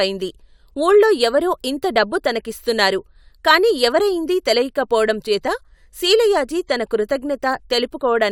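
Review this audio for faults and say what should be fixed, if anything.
No faults heard; nothing here needs fixing.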